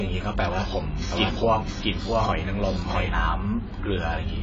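From start to finish the speech has nothing above 7.6 kHz, a hard ceiling with the artefacts of heavy compression. The container is a large MP3, but the damage points to a low-bitrate AAC encoding that was likely re-saved at a high bitrate, around 192 kbit/s. That is low-bitrate audio saved at a high bitrate: the generous second encoding adds almost nothing of its own and cannot restore what the first one discarded.

From 1.12 s to 3.10 s a doubled audio track appears. A second copy of the speech runs roughly 0.7 s behind the first and at about the same level. The copy is full-band, with no decay and no room colour, and it cuts in and out abruptly at those two times. Unlike an echo or reverb, it never fades, so it sounds like the same voice saying the same words twice, out of step. The likely cause is a second capture path or an edit that left two misaligned copies.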